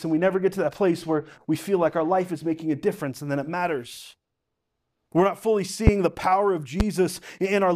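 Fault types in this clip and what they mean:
Loud pop: two sharp thumps near 5.87 s and 6.80 s, well above the speech, which continues underneath, unlike a dropout; likely an electrical voltage pulse.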